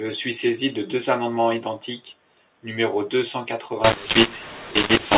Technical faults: mu-law and A-law mixed up

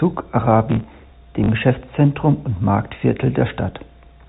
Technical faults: processor overload crackle; packet loss with last packet repeated

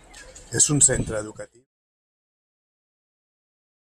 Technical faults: none

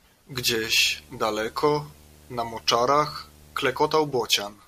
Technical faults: video or display buzz

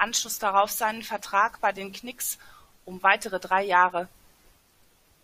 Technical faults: none

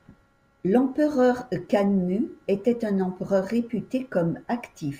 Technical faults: imaging from linear upsampling

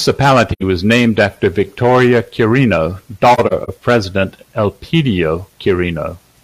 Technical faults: AAC frame loss with muting

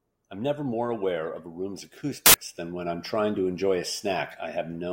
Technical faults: samples built from the wrong bytes

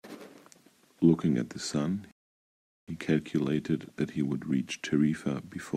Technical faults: rebuffering stall

